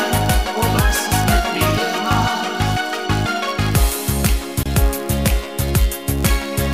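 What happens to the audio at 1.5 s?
At 1.5 s you're hearing a block size mismatch (padded), and it runs the whole clip rather than starting there. One stage hands over blocks slightly shorter than the next stage expects, so each block ends in a sliver of zeros. Those tiny dropouts repeat at 99.6 Hz, which comes through as a steady buzz. The padding also stretches the timeline, so everything plays at 0.996× speed with pitch essentially unchanged.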